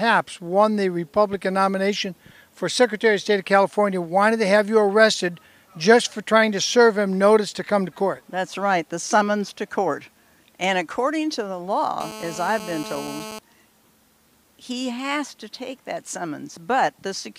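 From 12.00 to 13.39 s, a nearby 2G phone on a call pulses at 217 Hz, which the audio circuit rectifies into GSM phone buzz: a steady, raspy drone about 14 dB below the signal.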